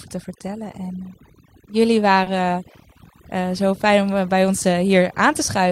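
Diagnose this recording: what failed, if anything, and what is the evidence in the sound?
Across the whole recording the background drops to an unnatural near-silence broken by twinkling specks. That points to overdone noise removal at the call-processing stage. A suppressor set too aggressively shuts individual frequency bands down whenever they sit close to its noise estimate. The specks are isolated bands flickering open and shut, and quiet parts of the speech are cut away with the noise.

At about 2.23 to 2.28 s a sound is held slightly too long, and then the speech picks up exactly where it left off. That is a short stall from a late packet in the network path. The jitter buffer ran dry, so the receiver extended the last sound for about 30 ms until the packet arrived. Nothing was lost, but playback now runs about 30 ms later.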